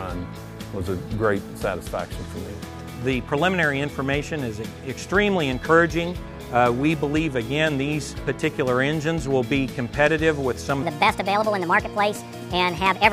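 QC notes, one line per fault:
10.83–13.12 s, section at the wrong speed: the final stretch suddenly plays 1.42 times faster, so the sound turns hurried and rises about seven semitones, with pitch and tempo shifting together. This is likely from the audio being fitted to a mismatched playback or editing clock.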